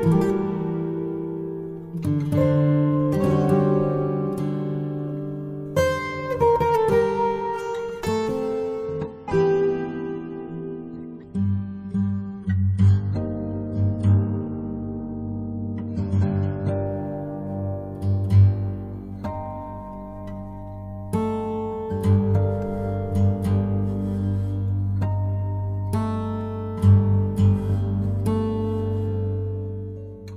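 The audio drops to a lower bitrate of its adaptive stream from 8.86 s to 16.86 s. For those 8 seconds the treble drops abruptly and the sound turns thinner and more smeared, with swirling codec artefacts, then snaps back with no gap. This fits a connection slowdown forcing a switch from roughly 128 kbit/s MP3 to about 24 kbit/s. A spectrogram shows a flat ceiling at 9.3 kHz across that block; the waveform shows no break.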